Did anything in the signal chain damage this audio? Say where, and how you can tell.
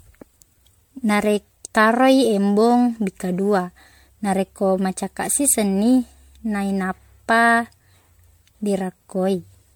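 Yes. Generation loss runs through the whole speech clip, from start to finish. The damage sits at the codec stage: the sound is swirly, smeared and hollow, and consonant attacks blur. This is worse than a single pass at a bitrate around 96 kbit/s would leave, though content still reaches up to about 19.9 kHz. The likely cause is repeated MP3 decoding and re-encoding, perhaps ten times, each pass requantising on a shifted frame grid so noise and spectral holes accumulate.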